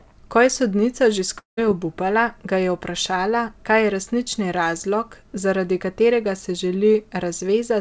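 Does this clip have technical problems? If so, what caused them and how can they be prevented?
Yes. At 1.38 to 1.59 s, a long network dropout, likely from packet loss, smears the last sound into a fading buzz, then leaves a flat gap in the waveform. A steadier connection with forward error correction or packet redundancy would keep such losses from being heard.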